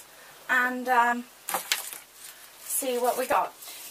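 Damaged data in a compressed stream appears twice: from 1.12 to 1.14 s, and again at 3.32 s. In both places a short stretch of the encoded stream has been corrupted, so the decoder cannot read the frames there correctly, loses its place and must look for the next valid frame header before playback can continue. Each event is brief, lasting about 20 ms.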